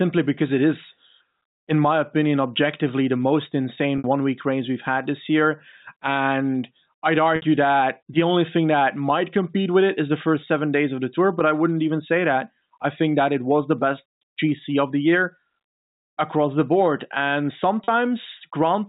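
Packet loss with pitch repetition bridges three gaps: 3.98–4.04 s, after "opinion objectively the most"; 7.36–7.42 s, after "this year and I'd"; and 17.84–17.88 s. Each is 60, 60 and 40 ms long, consistent with lost 20 ms packets. The receiver looped the last pitch period, so the sound briefly holds with a buzzy edge. A spectrogram shows flat, evenly spaced harmonic stripes, and the waveform shows identical repeating cycles. The G.711 telephone band stays capped at 4 kHz.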